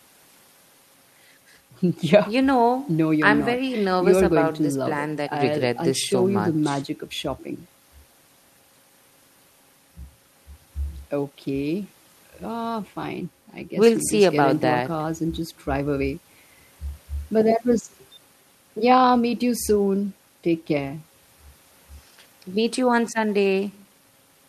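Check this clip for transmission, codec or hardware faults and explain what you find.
No faults found in this clip.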